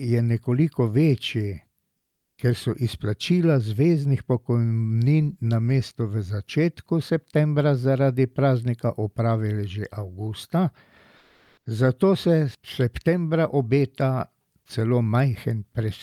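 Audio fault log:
1.97–2.37 s and 11.17–11.65 s, comfort noise in place of the background. The real background in these pauses becomes a steady, featureless hiss, about 6 dB quieter the first time and about 1 dB the second. Discontinuous transmission is the likely cause.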